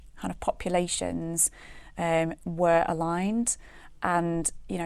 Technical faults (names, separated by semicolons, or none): none